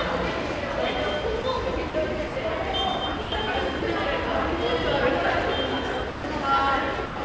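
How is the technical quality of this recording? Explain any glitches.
The sound briefly drops out seven times, with nothing above 8 kHz throughout, consistent with G.722 on a WebRTC call path.

At 1.42–1.44, 1.90–1.94, 2.28–2.36, 3.22–3.32, 3.80–3.82, 6.10–6.24 and 7.06–7.16 s, the sound gives way to steady noise for 20 to 140 ms. This is likely sound dropped by the voice detector, which treated quieter sound as background and stopped sending it, so comfort noise filled each gap.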